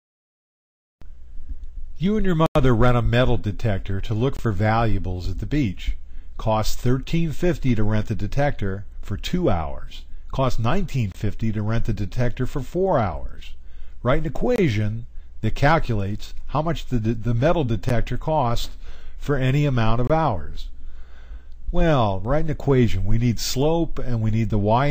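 A short hole in the sound marks most blocks of digital silence: a longer dropout of about 93 ms at 2.46 s, gaps of about 23 ms at 4.37, 11.12, 14.56 and 20.07 s, and a single tick at 17.89 s. The audio cuts out and back with no fade. The output buffer was likely not filled in time, and the 23 ms gaps fit missed 1024-sample buffers, with 4096 samples for the longest.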